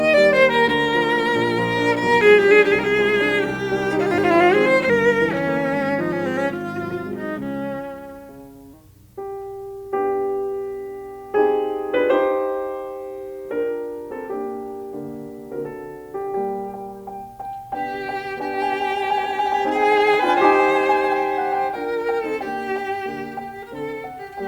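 From 4.90 to 8.73 s the music drops into a section at the wrong speed. It plays at 0.884 times its proper rate, so it drags and sinks about two semitones flat. The likely cause is playback against a mismatched clock.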